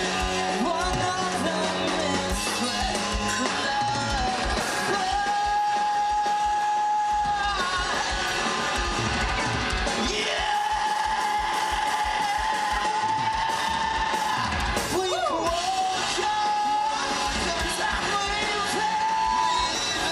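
From 18.96 to 19.81 s, loudspeaker feedback squeal breaks in. A microphone is picking up its own loudspeaker, and the loop runs away at 996 Hz. The pure tone swells over about 0.4 s until it matches the surrounding sound in loudness.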